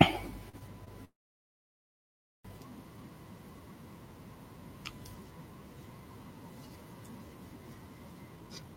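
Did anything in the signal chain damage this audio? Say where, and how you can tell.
Yes. At 0.49 s and 0.85 s the sound briefly holds, about 40 ms then 22 ms: short stalls from a late packet, with the network jitter buffer running dry.

From 1.05 s to 2.47 s the audio freezes, a fading buzz then roughly 1.3 s of silence: a call audio freeze, likely from network-delayed packets.

From 8.37 s to the end, speech runs hurried at unchanged pitch, about 149% speed: a jitter buffer speed-up that trims pitch periods, roughly a fifth of a second.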